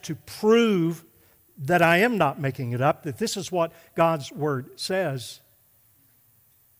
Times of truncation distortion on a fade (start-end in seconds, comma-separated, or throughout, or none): none